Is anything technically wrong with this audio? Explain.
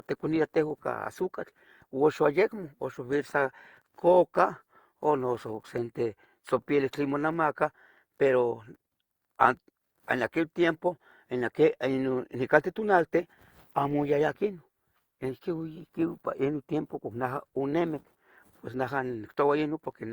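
Yes, there's generation loss running through the whole speech clip. It likely comes from being lossy-encoded around four times, each pass requantising on a shifted frame grid so the damage stacks. That leaves it swirly, hollow and smeared with soft attacks, worse than a single pass of Opus at 64 kbit/s would explain.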